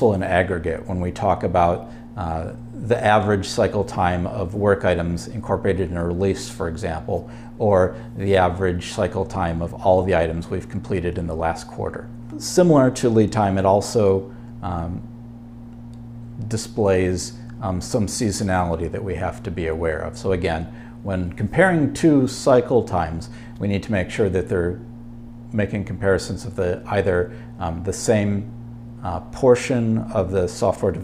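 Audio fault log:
No technical faults can be heard anywhere in this audio; the signal holds steady and continuous for its whole duration.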